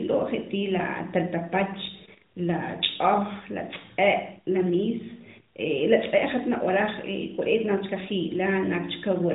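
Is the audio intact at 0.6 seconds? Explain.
Yes, the audio is intact at 0.6 seconds, with nothing there beyond the band-limited sound of the AMR narrowband mobile codec carrying it.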